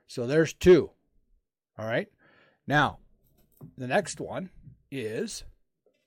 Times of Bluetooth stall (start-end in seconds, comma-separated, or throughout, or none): none